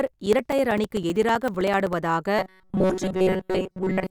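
Speech runs through two distinct faults. From 0.07 to 1.93 s there are periodic USB or driver dropouts: roughly 4 ms silences every 64 ms, about thirty in all. They are audible as regular ticks and show as narrow flat gaps in the waveform and thin vertical lines on a spectrogram. From 2.39 s to the end comes a robotic sound from repeated short buffers, likely caused by a segment of about 5.3 ms being replayed for most of the stretch. This imposes a rigid 188 Hz buzz, visible on a spectrogram as flat, evenly spaced harmonic stripes.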